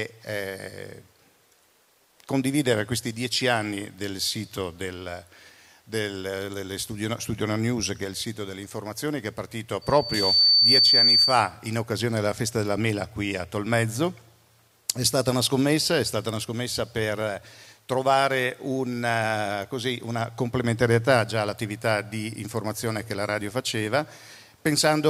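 At 9.81 s a loudspeaker feedback squeal kicks in: the mic is catching its own speaker, and the loop runs away at 4.6 kHz. You hear a thin tone swell over roughly half a second to about 10 dB above the sound, gone by 11.51 s.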